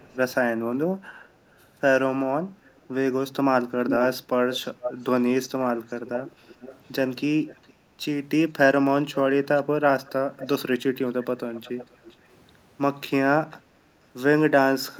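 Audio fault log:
0.00–0.35, 2.65–2.86, 3.87–5.05, 5.88–6.80, 7.47–7.73, 9.14–10.47, 11.54–12.16, 13.50–13.57 s: echo leak. A delayed copy of the speech returns about 0.43 s late, lengthening steadily to 0.48 s. It sits roughly 40 to 5 dB below the speech and is loudest at 3.87–5.05 s. This is likely a far-end loudspeaker picked up by that side's microphone and not fully removed by its echo canceller. On a spectrogram, fainter duplicate harmonic patterns trail the speech by that gap; on the waveform, repeated envelopes follow each burst.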